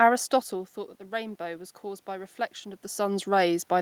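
A speech recording with automatic gain rising from 1.1 s to the end: after the input drops by about 10 dB, the gain control slowly lifts voice and room noise together, visible as a waveform envelope and spectrogram noise floor swelling in step.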